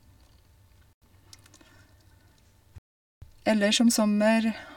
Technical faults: Bluetooth stall

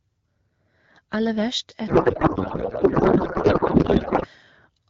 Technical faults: codec payload misread

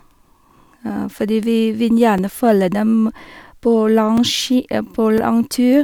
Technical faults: periodic USB or driver dropouts

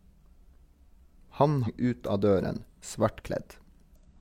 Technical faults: damaged data in a compressed stream

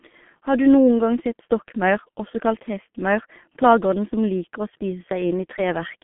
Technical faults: G.723.1 codec

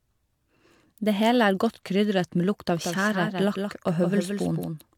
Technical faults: doubled audio track

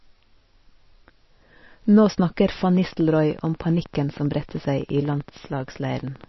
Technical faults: MP3 compression; train of clicks

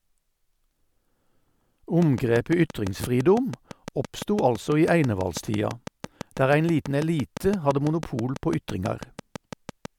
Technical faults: train of clicks

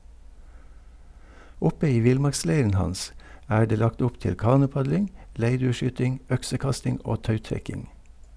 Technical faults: none

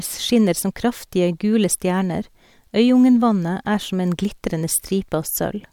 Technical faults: none

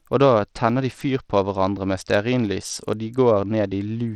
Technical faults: Bluetooth SBC compression

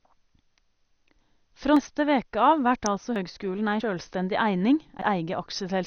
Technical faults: MP2 compression; dropped buffer (overrun); electrical switching spike

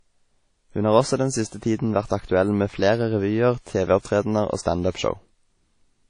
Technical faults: WMA compression

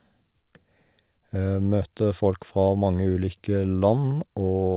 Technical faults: none

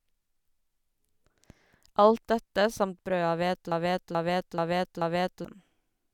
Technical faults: broken-record loop

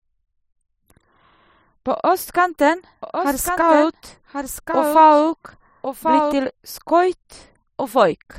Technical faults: doubled audio track

